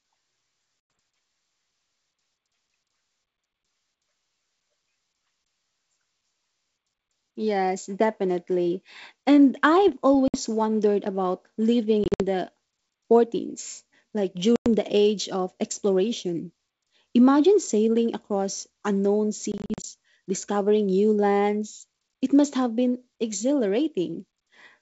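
Packet loss on an ADPCM call hits at 0.95 s, 10.28–10.40 s, 12.04–12.22 s, 14.56–14.67 s and 19.52–19.85 s. Each time, a few packets go missing (60 to 160 ms of audio) and are replaced by silence, so the speech drops into hard-edged holes. At 12.04 s and 19.52 s the gaps are broken into several short dropouts. Because the decoder's adaptive predictor and step size lose track of the sender's, speech comes back with brief, slight distortion.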